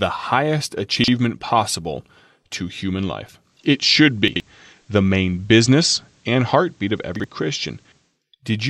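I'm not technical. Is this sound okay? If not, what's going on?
No, there are two problems.

Chunks out of order: three times, a short slice of the audio plays later than it should. The sound is carried in pieces 40 ms long, and one piece was delivered late and slotted in after pieces meant to follow it. Nothing is missing, but the order is scrambled. This happens at 0.92 to 1.08 s, just before "possible to human" (three pieces late), at 4.28 to 4.40 s (two late), and at 7.16 to 7.24 s (one late).

Digital radio blending to analogue: from 3.36 s, after "possible to human", until 8.23 s, the radio loses its digital signal and fades across, over about a third of a second each way, to the ordinary FM broadcast of the same station. During that stretch a faint background hiss appears, and the loudness shifts slightly. At 8.23 s it fades back to the cleaner digital sound.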